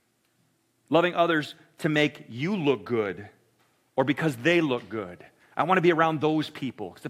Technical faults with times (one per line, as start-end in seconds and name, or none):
0.00-7.09 crude rate conversion